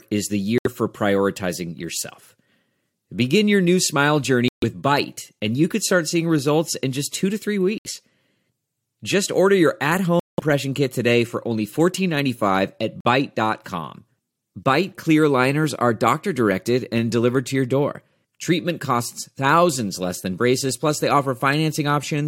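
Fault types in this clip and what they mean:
Corrupt frame muted: bit errors damaged compressed frames, the decoder rejected them, and the player filled each gap with silence while keeping the timeline intact. The speech cuts abruptly to nothing five times: at 0.58 s just after "is the" for 0.09 s, at 4.48 s after "your new smile" for 0.16 s, at 7.78 s for 0.08 s, at 10.2 s after "order your at" for 0.2 s, and at 13.01 s for 0.06 s.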